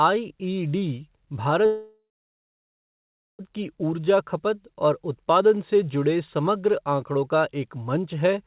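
A call audio freeze runs from 1.66 to 3.41 s. The speech halts, a short fading buzz or hiss decays into about 1.35 s of silence, likely because delayed packets left the jitter buffer empty. The speech then resumes where it stopped, 1.73 s late, with nothing lost.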